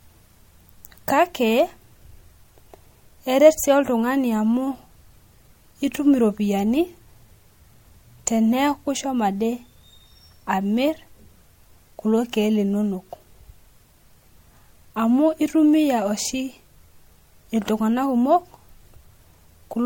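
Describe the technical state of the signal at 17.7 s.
At 17.7 s the speech carries generation loss, as it does for the whole clip. The tone is swirly and hollow, and consonant attacks are smeared. Nothing is heard above 16.7 kHz. The likely cause is repeated lossy coding, the audio decoded and re-encoded a few times at a low MP3 rate, fitting 64 kbit/s. Each pass quantises on a shifted frame grid. So noise and spectral holes pile up beyond what one encode would leave.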